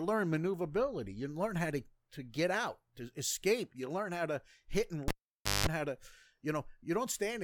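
At 5.08 s a cable is pulled and plugged in: a pop cuts the speech to near silence for about 0.54 s, during which 50 Hz mains buzz sounds for about 0.19 s as the bare tip touches, and another pop restores the sound at 5.67 s. That buzz and the paired pops set it apart from a plain dropout.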